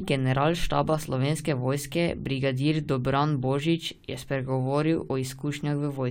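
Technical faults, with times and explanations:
No technical faults can be heard in this speech.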